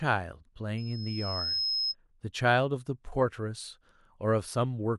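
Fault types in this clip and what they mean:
Loudspeaker feedback squeal: the mic is hearing its own speaker, so a 5.2 kHz tone swells up over most of a second until it's roughly as loud as the speech.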